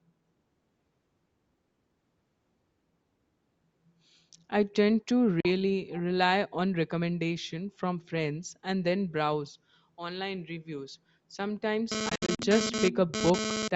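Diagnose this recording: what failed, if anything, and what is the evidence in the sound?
Bluetooth dropout, at the wireless playback link. The sound cuts to silence at 5.40 s for about 43 ms, then resumes further along, as if it had kept playing. From 12.09 to 12.39 s, about 149 ms is lost in scattered gaps, the longest 64 ms. The likely cause is packets arriving too late and being discarded.

GSM phone buzz, picked up in the analogue wiring. From 11.92 to 13.68 s a hard, raspy buzz at 217 Hz with dense harmonics sits at about 2 dB below the signal and comes and goes, which points to a nearby 2G phone transferring data, its radio bursts rectified by the audio circuitry.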